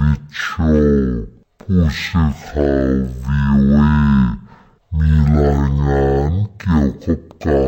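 Throughout, stereo read as mono plays interleaved left and right samples as one channel, giving half speed, an octave lower, plus a faint mirrored image high in the spectrum, unlike simple slow playback.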